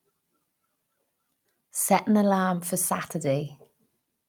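Nothing stood out as a technical problem on listening to the speech in this recording.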